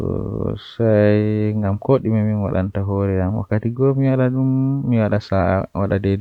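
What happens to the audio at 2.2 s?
Nothing goes wrong at 2.2 s; the speech carries on intact through that moment with no dropout, click or distortion.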